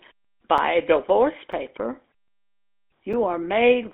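Throughout, the speech has a buzzy, gravelly roughness and a thin telephone band running from about 250 Hz to 3.6 kHz, with nothing above 3.8 kHz. This is the GSM full-rate codec, which rebuilds the voice from a vocal-tract model driven by coarse pulse excitation, consistent with its 13 kbps rate.

Sharp ticks cut in at 0.58 s, 1.52 s and 3.13 s, each a hole of about 5.8 ms. These are blocks of digital silence: the output drops to silence without any fade. The length fits a 256-sample buffer, likely one that wasn't filled in time.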